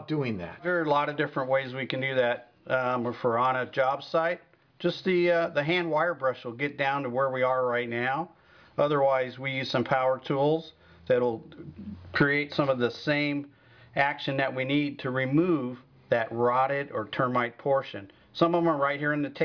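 No technical faults can be heard in the recording. The sound runs steadily throughout, with nothing that calls for comment.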